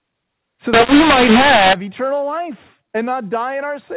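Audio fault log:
0.73–1.73 s: mu-law and A-law mixed up. A-law telephone samples decoded as mu-law scramble levels, giving harsh, distorted speech and noise filling the quiet gaps.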